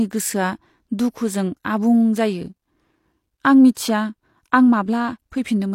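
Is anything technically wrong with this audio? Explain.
Yes. At 3.74 to 3.77 s there is pre-echo: a transform codec spread quantisation noise across its block, so about 25 ms of hiss precedes the attack, smearing it.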